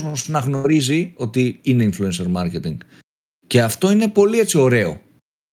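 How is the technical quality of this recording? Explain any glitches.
The recording has one noticeable glitch near the start. From 0.55 to 0.67 s, just before "ότι είναι", the last sound is briefly held and fades, then the speech jumps ahead. This is a burst of packet loss: consecutive packets never arrived in time, so the receiver stretched and faded the last sound for about 86 ms, and roughly 80 ms of speech is simply missing.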